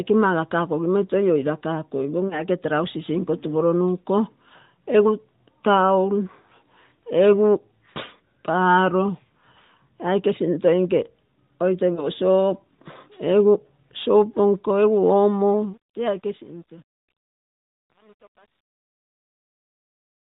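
Lost AMR speech frames at 2.28 to 2.42 s and again at 11.94 to 12.09 s: each brief dip or warble sounds like one failed 20 ms frame concealed by the decoder repeating its last good settings at falling gain.

Truncation distortion on a fade from 15.53 s to the end: the fade-out, starting at about 15.5 s, keeps too few bits without dither, which fits roughly 9 bits. From 16.22 s the quiet tail turns gritty.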